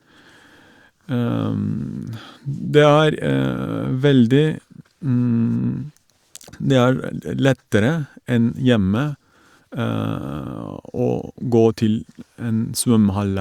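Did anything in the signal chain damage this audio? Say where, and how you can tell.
No, nothing in the chain audibly damaged this speech.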